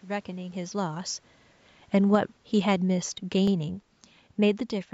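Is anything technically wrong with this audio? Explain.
Yes, there are two kinds of fault in this speech. Overlapping chunks appear at 1.42 to 1.47 s and again at 3.47 to 3.52 s, two seconds apart. Each new 2-second chunk begins 50 ms before the previous one ended, so that slice plays twice and is heard as a brief stutter or click. A waveform shows a small duplicated segment at each join, and a spectrogram shows a thin vertical seam.

Automatic gain falling runs from 1.94 to 3.77 s. The gain control judged the input too loud or its background noise too strong and eased its level down by about 3 dB. Speech and background sink together, visible as a gradual narrowing of the waveform envelope and slightly dimmer spectrogram energy.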